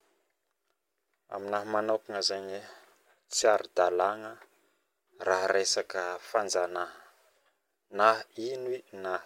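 No technical faults can be heard anywhere in the recording. The speech continues without any interruption or disturbance throughout.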